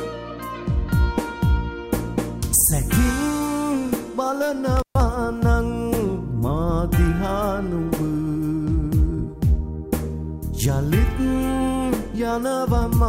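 At 4.77 s an intermittent contact fault begins, lasting until 5.01 s. A loose cable or plug connection briefly breaks. The sound drops out for about 130 ms. Crackle marks both edges of the gap, with faint hiss while the line is open.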